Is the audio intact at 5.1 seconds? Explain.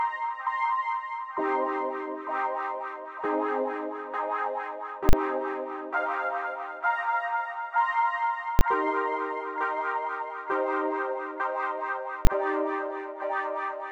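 No. From 5.09 to 5.13 s the sound is replaced by invalid numbers at full scale. A calculation produced infinite or invalid values, and these were pinned to the maximum level for a 40 ms block. So short a block is heard as one loud bang.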